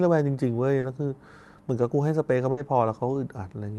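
At 0.79 to 0.85 s there is a short concealed packet loss. About 40 ms of audio never arrived in time, and the receiver bridged the hole by extending the preceding sound before blending back into the real signal. It is heard as a brief smear or wobble.

At 2.51 to 2.59 s a burst of packet loss removes about 60 ms. The decoder keeps the last sound going while fading it, so the gap comes across as a held, dying buzz or hiss. Playback then picks up further along, with the lost section simply skipped. Through the call path the upper band stops near 12 kHz, which fits an Opus stream.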